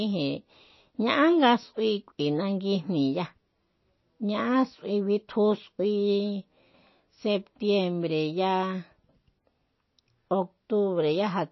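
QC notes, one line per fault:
Throughout, MP3 compression: the speech sounds dull and watery, with a swirling, chirpy edge on s sounds and consonant onsets smeared rather than crisp. Nothing is present above about 5.8 kHz, so sibilants lose their bite. The damage is plainly audible and is likely from low-bitrate MP3 encoding, roughly 25 kbps. Starved of bits, the encoder sheds the top band entirely and drops quieter frequency components that flicker in and out between frames, which produces the swirl.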